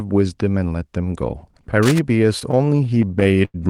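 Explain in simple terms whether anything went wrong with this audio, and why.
Two things go wrong in this speech recording.

From 1.83 to 1.99 s there is a burst of cable scratch noise: a rough, crackling rustle laid over the speech for a fraction of a second. That sound is what you hear when a worn cable, plug or knob is disturbed and its electrical contact flickers, so the likely cause is a loose or worn connection being moved. The noise is fairly loud compared with the speech.

From 2.39 to 3.56 s the audio has repeated stalls (stutter). The sound keeps catching and dragging, pausing more than a dozen times, with the longest hold lasting about 90 ms. The audio was arriving over a network too slowly to keep up with playback, so the player repeatedly ran out and stretched the last bit of sound to cover each wait. Nothing is lost, but roughly a fifth of that stretch is filler, which makes it sound halting.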